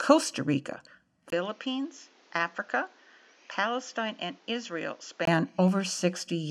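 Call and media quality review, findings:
Speech dulls abruptly from 1.30 to 5.27 s, short gap of about 20 ms at 1.30 s. Band stops at 7.4 kHz, level down roughly 10 dB, new noise floor roughly 30 dB under signal. Likely input switched to a poorer device; clears at 5.27 s.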